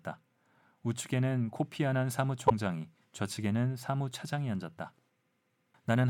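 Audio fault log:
2.48–2.51 s, corrupt frame decoded: a short glitch cuts across the speech for roughly one frame's worth of time, about 36 ms, peaking at around -10 dBFS. Some of the bits carrying that compressed frame were damaged, yet the decoder still rebuilt it, so misread gains and spectral codes put energy at frequencies the speech never had. The result is a brief glitch that starts and stops at the frame boundaries.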